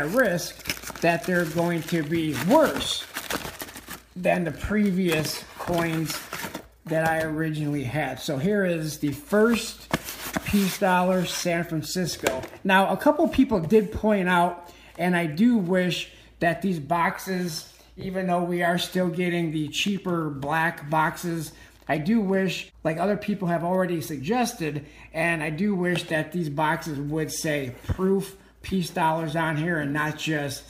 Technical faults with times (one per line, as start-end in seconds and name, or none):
none